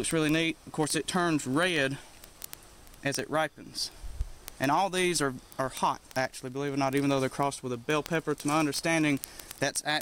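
Word clock ticks run from 0.11 s to 10.01 s, roughly every 20 ms: an unlocked receiving clock, drifting about a thousand ppm, drops or repeats single samples, producing sharp, uneven ticks.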